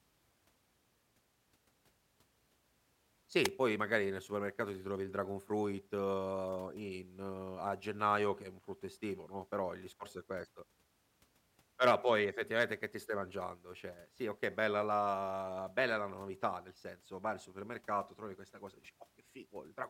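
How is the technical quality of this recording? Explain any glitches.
One glitch stands out in this speech recording: a wireless microphone squelch dropout at 3.44 s, lasting about 50 ms. The analogue FM radio link fades, so hiss swells briefly before the receiver's squelch mutes the output for a tiny 0.02 ms gap. That rising static ahead of the cut is what separates it from a digital dropout, which breaks off cleanly without any noise build-up.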